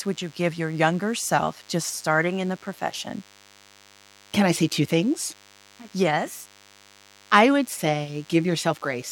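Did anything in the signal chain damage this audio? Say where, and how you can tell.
Yes. A DECT cordless phone buzz runs under the speech for the whole clip, and it entered in the analogue wiring. It is a thin, steady buzz with a 100 Hz fundamental and a dense stack of harmonics, sitting roughly 30 dB below the speech. A nearby DECT handset or base transmits a short radio burst every 10 ms. Unshielded cabling or an input stage picked that up and rectified it, turning the burst envelope into an audible pulse train.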